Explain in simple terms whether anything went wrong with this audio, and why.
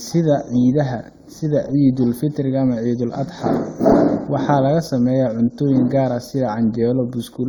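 The speech sounds hollow and phasey from start to end. This is channel delay (comb filtering): one channel arrives a fraction of a millisecond late, and mixing them cancels evenly spaced tones, starting around 3 kHz.

Throughout the clip there are also different codec artefacts heard together, of mixed origin, likely from transcoding between lossy codecs, with the audio squeezed by AAC and then again by Opus.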